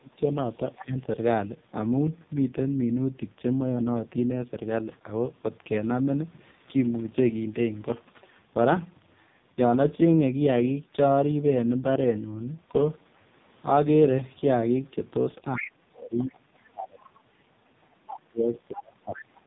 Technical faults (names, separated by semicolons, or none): AMR narrowband mobile codec; speech suppressed in double talk; other side's voice leaking through